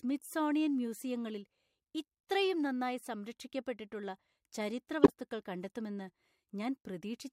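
At 5.03 s the speech is interrupted by a short, harsh burst lasting about 0.1 s, to 5.13 s. This is a corrupt frame decoded. Some bits in the compressed stream were damaged, and the decoder played the frames anyway. Misread gains and codes placed energy at the wrong frequencies. The hit spans a handful of consecutive frames. It sounds like a squeaky, noisy blip, and it is loud, peaking at roughly -10 dBFS.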